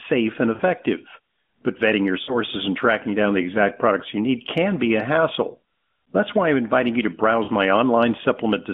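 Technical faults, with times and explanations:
0.54–0.62 s, 2.24–2.38 s (after "vetting your") and 7.44–7.50 s (after "I'm inviting you to"), lost AMR speech frames: 40–60 ms dropouts where the decoder stretches the last good sound with falling gain, so it smears into a brief warbly dip.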